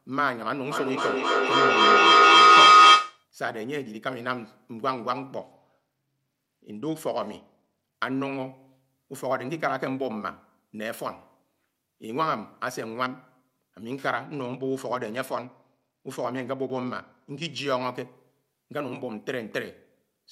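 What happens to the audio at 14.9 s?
A Bluetooth SBC bit pool drop runs from 14.17 to 17.58 s. Squeezed for bandwidth, the encoder starves the top sub-bands and quantises the rest coarsely, which fits a bit pool falling from 28 to 13. The speech turns dull and gritty until quality recovers.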